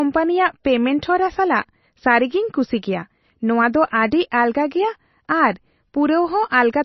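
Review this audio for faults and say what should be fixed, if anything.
Throughout the speech, the treble stops dead at 5.9 kHz and the sound is heavily watery and swirly, which likely comes from MP3 compression at a very low bitrate, around 24 kbps. On a spectrogram this shows as a hard ceiling at 5.9 kHz with speckled holes where weak lines drop in and out between frames. Prevent it by encoding at a much higher bitrate or keeping a lossless master.

At 4.11 s a pre-echo places about 12 ms of hiss just before a sharp attack, because the codec's quantisation noise, sized for the loud onset, spills across the quieter start of its block. In the waveform, low-level fuzz creeps in ahead of the transient, and the spectrogram shows a smear of broadband noise before the onset. Prevent it with a higher bitrate or an encoder that switches to short blocks on transients.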